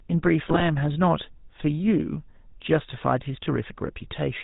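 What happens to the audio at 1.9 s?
At 1.9 s the speech carries GSM full-rate codec damage, present across the whole clip rather than starting there. The codec rebuilds the voice from a vocal-tract model driven by sparse regular pulses, and the plainly audible buzzy, gravelly roughness fits a 13 kbps GSM stream. That grit is what separates it from simple band-limiting, which would dull the voice without roughening it.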